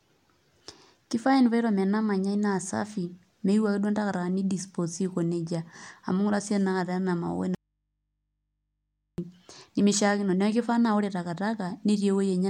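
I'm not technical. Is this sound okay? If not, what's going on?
No. From 7.55 to 9.18 seconds the speech snaps off for about 1.6 seconds, leaving only a very quiet hum. This is an audio dropout to a faint residue, likely a broken signal feeding a still-live input. A pause or fade would ease off instead.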